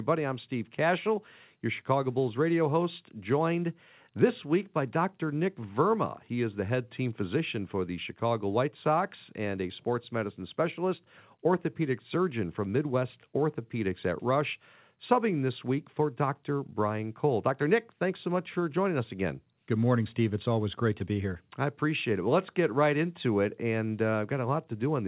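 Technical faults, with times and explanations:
No technical faults found.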